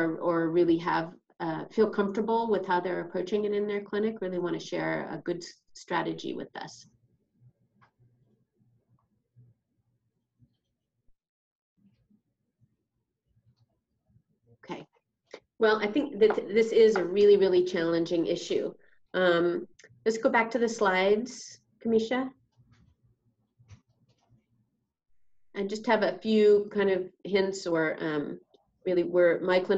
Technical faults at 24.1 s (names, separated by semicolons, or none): none